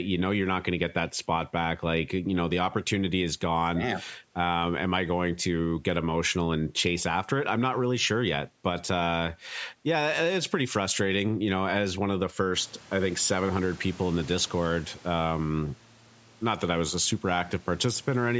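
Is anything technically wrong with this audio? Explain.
No, nothing is technically wrong with this audio.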